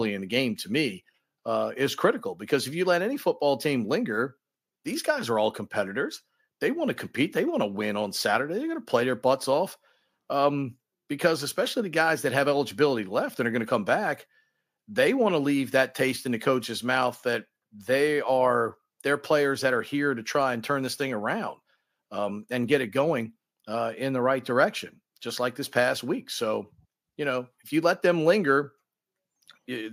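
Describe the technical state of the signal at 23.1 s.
At 23.1 s the speech signal is intact, with no fault present at that moment.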